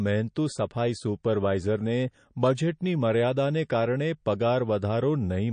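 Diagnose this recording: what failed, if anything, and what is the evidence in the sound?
The codec stage failed: throughout the speech the treble stops dead at 9.5 kHz, and the sound carries a plainly audible watery, swirling texture, which is likely MP3 compression at a starved bitrate, roughly what a 34 kbps encode would give. Short of bits, the encoder discards everything above a fixed cutoff and zeroes weak frequency lines that flicker on and off between frames. A spectrogram shows a hard horizontal ceiling at 9.5 kHz with speckled, blocky holes below it.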